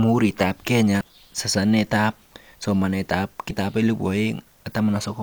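At 1.01 to 1.03 s, the speech briefly breaks up. This is damaged data in a compressed stream. Part of the encoded data there is wrong, so the decoder cannot read those frames properly. It loses its place and hunts for the next valid frame header before playback recovers. The same fault returns at 3.50 s as a shorter blip. Both events are over in a fraction of a moment.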